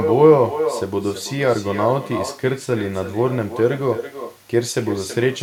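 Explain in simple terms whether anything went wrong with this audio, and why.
Throughout, there is echo with no canceller: each phrase returns about a third of a second later as a quieter, thinner copy, a distinct repeat rather than the smooth tail of room reverb.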